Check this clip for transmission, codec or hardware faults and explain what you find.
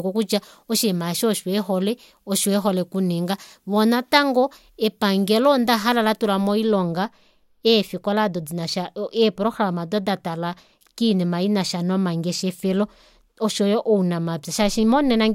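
One fault is present: pre-emphasis left on, from the start of the clip to 6.72 s. The treble lift applied ahead of transmission, matching a 50 µs FM curve, was never undone by the corresponding de-emphasis, so high frequencies stay raised relative to the midrange, by about 10 dB at 10 kHz against 1 kHz. Over that stretch the speech sounds thin, bright and sibilant, with consonants pushed forward.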